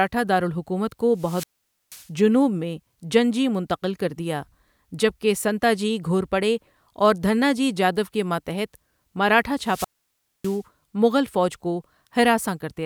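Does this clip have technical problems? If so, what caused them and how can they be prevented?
Yes. Two wireless microphone squelch dropouts occur, at 1.14 to 2.10 s after "دارالحکومت کو" and at 9.60 to 10.63 s after "کے ماتحت مراٹھا". Each starts with a rise of hiss. Then the receiver's squelch mutes the output, for about 0.49 s and 0.60 s. Speech returns at "جنوب میں جنجی منتقل" and "مغل فوج کو". The transmitter's RF signal faded too weak to hold the receiver open. Better antenna placement, line of sight and diversity reception would prevent it.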